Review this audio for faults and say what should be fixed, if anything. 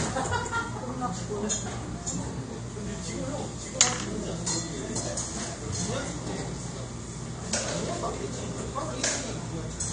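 The AAC compression damage is plainly audible across the whole clip. It comes across as dull and smeared, with a fizzy, warbling edge, which points to a low bitrate of around 32 kbps. The likely cause is AAC-LC stripping detail it can't afford to code. Keep an uncompressed master, or encode at a much higher bitrate.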